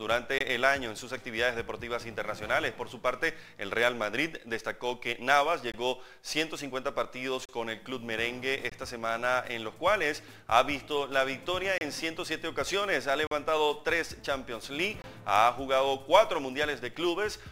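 Seven blocks of digital silence break up the audio, at 0.38, 5.72, 7.45, 8.70, 11.78, 13.27 and 15.02 s, each lasting about 21 to 43 ms. The recurring 21.33 ms hole, doubled to 42.67 ms at 13.27 s, fits a 1024-sample output buffer going unfilled. Unlike packet-loss concealment, nothing is smeared or repeated, and unlike a level dropout, the cut is total and abrupt.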